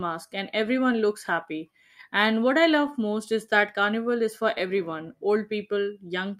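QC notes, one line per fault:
Throughout: clock drift between sender and receiver. The sending clock runs roughly 3 percent slow, so the receiver's buffer keeps draining and has to pad things out. That leaves small, irregular timing hiccups running through the whole speech clip rather than one obvious glitch.
0.66 to 1.91 s: scattered short gaps. About five tiny dropouts, the longest around 10 ms, were patched by carrying the last bit of sound forward, roughly 30 ms in total. They come across as ticks or little smears, not real holes.
1.53 to 5.95 s: repeated timing corrections. The receiver keeps repeating tiny slices to stay in step with the slow sender, adding roughly a tenth of a second overall and playing at 98 percent speed. The edits are small and come at uneven spacing.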